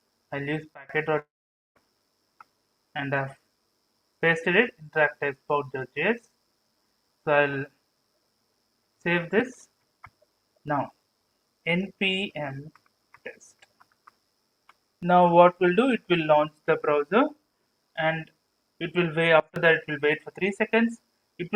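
The audio has two sudden gain jumps and one long network dropout. At 0.74 s the level falls abruptly by about 23 dB, and the background drops with it. It stays down until 0.89 s. At 19.40 s a second drop of about 21 dB occurs, lasting until 19.56 s. Each step happens between one sample and the next, with no ramp. This is likely a digital gain setting applied instantly. From 1.19 s to 1.77 s comes a long network dropout. About 0.56 s of audio never arrives and is never played. The receiver fills the gap, but most of it, about 0.48 s, is silent. Sound resumes at 1.77 s without the lost section. The likely cause is packets lost or delayed in transit.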